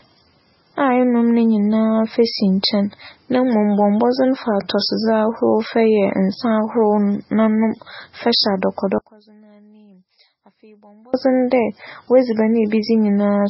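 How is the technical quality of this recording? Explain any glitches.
The technical quality is poor. Two faults are audible.

The whole recording carries heavy MP3 compression damage. Nothing is heard above 5.6 kHz. The speech sounds watery and swirly, which points to a very low bitrate, likely around 16 kbps.

From 8.98 to 11.14 s, the speech drops by about 29 dB and turns faint. This is the sound of one channel inverted. Its polarity is likely reversed, so the shared centre cancels when the channels are summed to mono.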